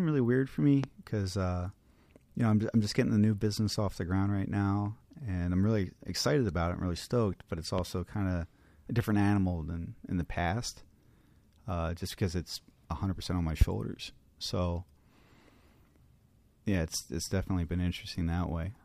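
A sudden voltage spike, likely from a switch, plug or static discharge, lands on the signal three times, at 0.84–0.86 s, 7.78–7.81 s and 13.61–13.64 s. Each is a single loud pop, about 15, 10 and 20 dB above the speech, which continues underneath.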